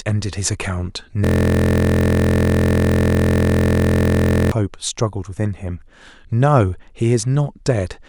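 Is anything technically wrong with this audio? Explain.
Yes. From 1.2 s to 4.5 s there is a system hang loop: playback froze while the hardware kept replaying one 23.2 ms piece of speech, which fits a 1024-sample buffer. Repeating at about 43 Hz, it sounds like a steady buzz.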